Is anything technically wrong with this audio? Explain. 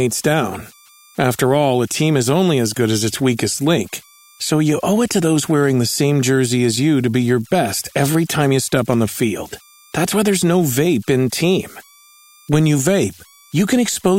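Yes. Throughout the speech there are converter idle tones: an undithered delta-sigma converter settles into repeating bit patterns on quiet input, producing a faint whistle around 1 kHz, about 32 dB below the signal, in pauses. A spectrogram shows a thin horizontal line there.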